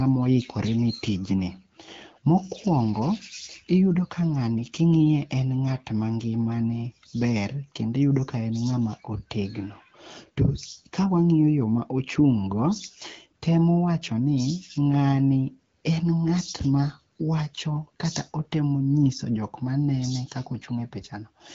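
No technical faults can be heard anywhere in the recording. The AMR wideband (HD Voice) codec is working normally at 12.65 kbit/s, and its band limit near 7 kHz and slight coding texture can be heard.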